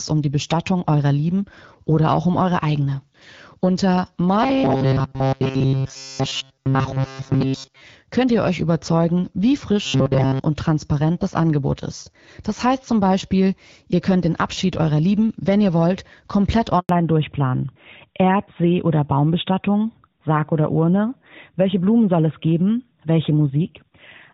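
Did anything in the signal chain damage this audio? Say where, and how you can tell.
Yes. From 4.43 to 7.81 s, and again from 9.86 to 10.40 s, the speech turns into a rigid metallic buzz at 134 Hz: robotic sound from repeated short buffers, likely a starved playback buffer looping a roughly 7.5 ms slice. The spectrogram shows rigid, evenly spaced harmonic lines, and the waveform shows one identical cycle repeating throughout the first span and across most of the second.

At the network stage, a handover gap runs from 16.79 to 16.89 s. For 100 ms no speech frames arrive while the call switches links, so the voice dies away within a few tens of milliseconds. The waveform drops to a flat line, and the spectrogram shows a blank column across every frequency.

Right after the switch, from 16.89 s to the end, the codec stage shows a fallback to narrowband: AMR-WB at 12.65 kbit/s gives way to AMR-NB at 12.2 kbit/s. 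The speech becomes duller, and on the spectrogram all energy above 4 kHz disappears at a sharp horizontal edge.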